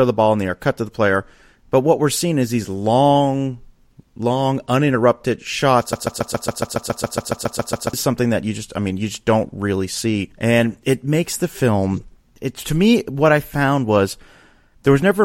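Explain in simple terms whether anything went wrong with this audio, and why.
The player or stream likely stalled and kept resending its last scrap of audio, a broken-record loop. After "long long uninterrupted shots", from 5.93 to 7.93 s, a 0.14-second snippet repeats 14 times, and the speech due there is lost before "something that you just".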